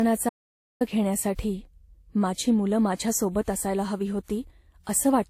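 Transcoding between lossy codecs runs through the whole speech clip. The sound carries two layers of coding damage at once, and nothing is present above 16.4 kHz. The likely cause is a Vorbis encode at a low rate that was later re-encoded to WMA 1. The character points to roughly 47 kbit/s followed by 64 kbit/s. The second encoder spent its bits reproducing the first one's artefacts and added its own, so both kinds are heard together over a capped top end.

An audio dropout to silence runs from 0.29 to 0.81 s. The speech stops abruptly and about 0.51 s of silence follows, with no room tone at all. The recording then resumes mid-flow on "घेण्यासाठी माझी मुलं". This points to the input signal being lost, likely through a broken link or a momentary mute, while the recorder kept writing silence. Whatever was said in that half-second is gone.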